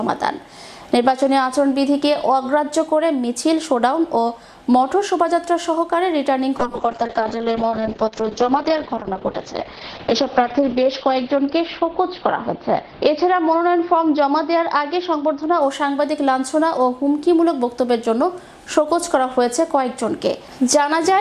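From 6.58 s to 15.67 s the audio turns rough and muffled, bottoming out for about 4.3 s, then clears. This is a call bitrate drop: the encoder was starved of bits, coding coarsely with a top end cut from 20 kHz to 6 kHz, which fits roughly 96 falling to 7 kbps.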